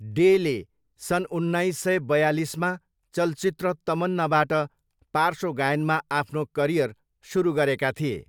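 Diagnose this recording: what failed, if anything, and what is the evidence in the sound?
Nothing in the speech recording points to a failure at any stage of the signal chain, from capture through to playback.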